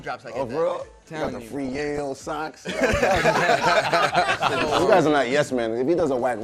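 Throughout, the audio sounds dull and plainly gurgling, with a granular roughness and upper frequencies that come and go, as if parts of the top end were being switched off and back on. The likely cause is MP2 compression: MPEG Layer II divides the signal into 32 sub-bands, and at a low bitrate, here fitting something near 80 kbps, the top bands lose their bits and the remaining bands are coarsely quantised. Layered on top are three bursts of DAB burbling, at 1.24 to 1.99 s, 4.28 to 4.80 s and 5.97 to 6.21 s. Corrupted bits in weak reception, around half a percent here, slip past error correction, and the wrong samples put short blips of noise into single sub-bands. Unlike the steady codec dullness, the burbling is short and intermittent.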